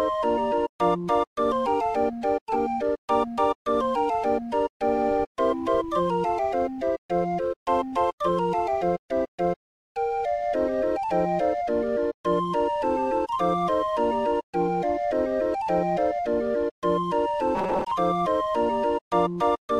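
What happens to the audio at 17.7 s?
At 17.7 s you're in a stretch of robotic sound from repeated short buffers, 17.55 to 17.91 s, likely from late audio, so short chunks loop into a rigid 188 Hz metallic buzz.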